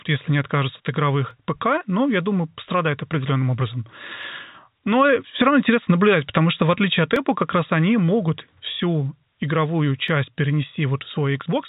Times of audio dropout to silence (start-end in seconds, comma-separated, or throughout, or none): none